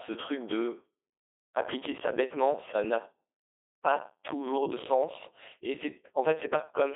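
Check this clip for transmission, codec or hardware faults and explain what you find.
One codec fault is present for the whole clip: the Codec 2 vocoder. Only pitch, voicing and envelope survive, resynthesised as sine waves, so the speech sounds robotic and buzzy, confined to 300 Hz to 3.6 kHz, with the codec running at 2.4 kbit/s.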